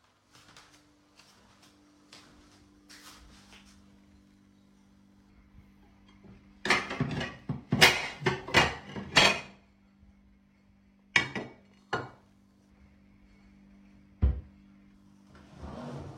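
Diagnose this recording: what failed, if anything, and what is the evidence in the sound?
The converter stage failed, with periodic clock jitter present throughout. Interference modulates the sampling clock at around 3 kHz, so every component gains sidebands that far above and below it, strongest on high content. A spectrogram shows mirrored ghost bands offset by that spacing, vanishing in silent stretches.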